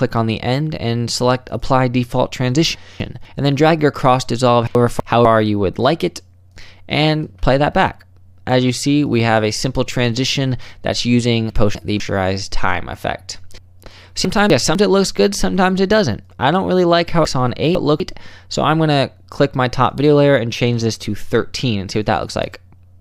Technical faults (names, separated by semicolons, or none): chunks out of order